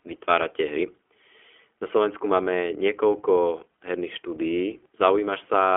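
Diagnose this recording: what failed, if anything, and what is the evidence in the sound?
Codec stage: iLBC coding throughout, nothing above 3.7 kHz, and audible roughness from independently coded 20 ms frames, consistent with the 15.2 kbps mode.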